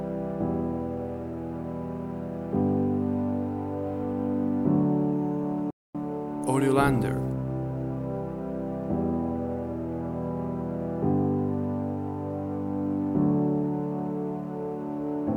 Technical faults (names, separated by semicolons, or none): playback stall